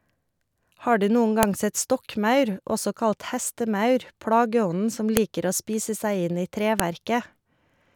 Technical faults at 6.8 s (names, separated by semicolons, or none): file header played as audio